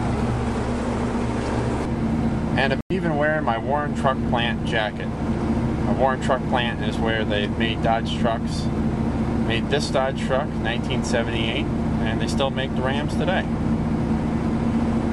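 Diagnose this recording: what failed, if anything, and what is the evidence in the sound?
A likely Bluetooth stall in the wireless playback link emptied the headphone buffer, cutting the sound to 97 ms of silence at 2.81 s before it resumed.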